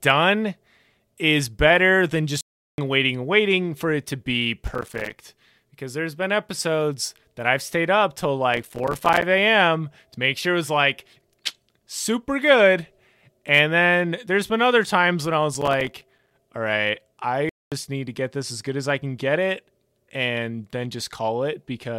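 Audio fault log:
2.41–2.78 s and 17.49–17.72 s, playback stall: The speech cuts out mid-flow for about 0.37 s after "is better than", resuming with "waiting waiting for it", and for about 0.23 s after "all right", resuming with "need to get this". The output simply falls silent and then carries on from where it stopped. The likely cause is the player running short of data or its thread being briefly blocked.
4.67–5.16 s, 8.52–9.22 s and 15.55–16.31 s, processor overload crackle: Each burst brings a gritty tearing over the speech, the first starting just after "for it to be". The processor repeatedly misses its deadlines for small audio buffers, roughly 30, 40 and 20 times respectively. Every late buffer drops out as a short hard-edged silence, and the gaps are tiny enough to fit buffers of roughly 5 ms. Strung together they sound like crackle, which stops once the load eases.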